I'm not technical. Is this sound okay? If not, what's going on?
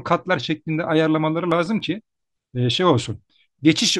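No. A scratch on the disc wiped out data the player couldn't rebuild, so these CD scratch ticks appear: six brief clicks between 1.23 and 1.95 seconds.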